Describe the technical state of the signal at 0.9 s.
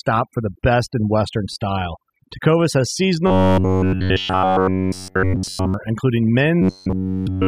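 At 0.9 s the speech carries overdone noise removal, present throughout the clip: an overly aggressive reducer cuts any band near its noise estimate, leaving near-silent background with twinkling specks. A spectrogram shows scattered isolated bright dots in the gaps and ragged, hollowed-out detail around the speech.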